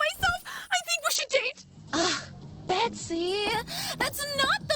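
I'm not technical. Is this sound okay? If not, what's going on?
No. At 1.17 s a call bitrate drop hits: the connection squeezes the audio, so the sound turns rough and muffled, losing its crisp highs, through to the end.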